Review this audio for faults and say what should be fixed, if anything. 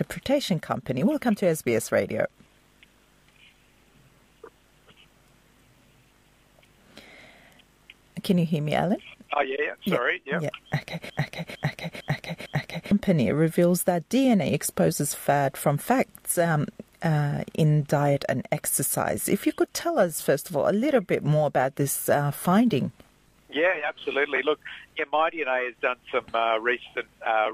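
A broken-record loop runs from 11.10 to 12.91 s. A 454 ms fragment repeats four times. A stalled player or stream likely resent its last buffer. Guard playback against stalls so missing data becomes silence, not a repeated fragment.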